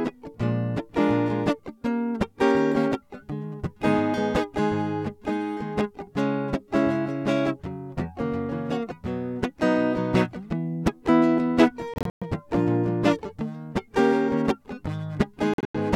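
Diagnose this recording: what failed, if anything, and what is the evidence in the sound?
The music breaks into sharp-edged silent gaps at 11.94–12.23 s (186 ms lost, longest run 116 ms) and 15.54–15.76 s (163 ms, longest 93 ms), then resumes further along. These appear as flat blanks on a waveform and empty vertical columns on a spectrogram. This is a Bluetooth dropout at the wireless playback stage, likely from packets arriving too late.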